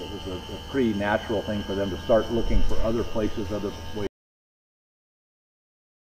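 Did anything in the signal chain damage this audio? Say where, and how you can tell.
Yes. There's an audio dropout to silence from 4.07 s right through to the end. The sound cuts off mid-flow into dead silence, with no room tone at all, so the likely cause is the input device or its link dropping while the recorder kept writing.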